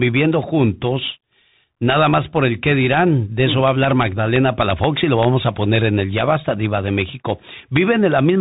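Speech that sounds boxed-in and narrow throughout, with nothing above about 3.8 kHz, a grainy hiss under the talking, scratchy s sounds, and loud bright syllables that smear and distort. That is the Bluetooth CVSD headset codec: the signal is sent as a single up-or-down bit per sample, which fits a 64 kbps stream. The adaptive step cannot keep pace with fast, loud high-frequency movement, so those moments break up. On top of this are harsh, splintering cracks, far sharper than ordinary clipping, at 2.93–2.98 s, across 3.68–4.84 s, at 5.23 s, 5.76 s, 6.18–6.21 s and 7.76 s. This is integer overflow. Peaks pushed only about 0 to 2 dB past full scale wrap around to the opposite extreme instead of being limited, so each one becomes a full-range jump in the waveform.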